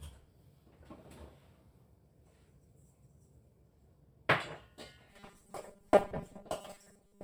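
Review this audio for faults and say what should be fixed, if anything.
From 5.09 s to the end, audio likely arrived too seldom, so repeated 5 ms buffers replaced about half of it: robotic sound, a rigid 200 Hz buzz.

Prevent it by enlarging the playback buffer and using concealment that fades or stretches audio instead of looping tiny buffers.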